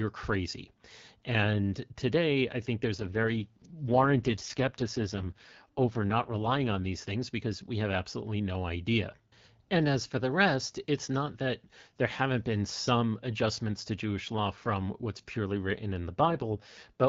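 From 2.95 to 6.86 s, and again from 16.25 s to the end, the speech turns rougher and more synthetic with no gap or band change. This is an AMR rate drop, with the sound pointing to the AMR-WB codec falling from 12.65 to 6.6 kbit/s.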